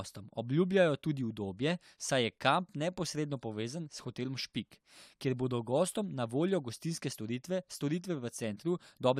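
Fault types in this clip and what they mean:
No faults can be heard in this speech clip. Nothing in the audio points to a technical problem at any point.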